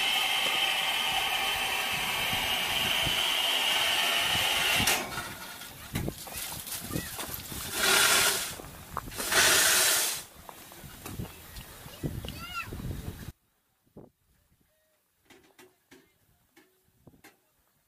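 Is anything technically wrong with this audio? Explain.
Yes. From 13.31 s to the end, the sound drops about 26 dB and turns faint, likely from one channel inverted, which cancels the shared content when the channels are summed.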